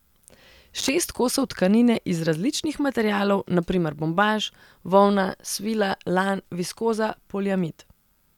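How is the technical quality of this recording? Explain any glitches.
The recording has one glitch: a burst of loose connector crackle from 0.78 to 0.89 s, just before "kosov tkanine iz različnih". For roughly a tenth of a second a worn or dirty contact in the signal path is making and breaking intermittently, so the speech is chopped into fragments and any DC on the line adds pops at each break. The result is a short, irregular scratching crackle laid over the speech.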